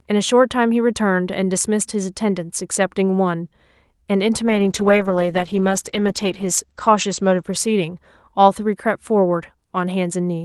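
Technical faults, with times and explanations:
4.47–8.91 s: call bitrate drop. The sound turns coarse and watery as the encoder runs short of bits, and the top end narrows from 12 kHz to 8 kHz, muffling it. The worst stretch lasts 2.13 s, which fits Opus falling from 48 to 10 kbps.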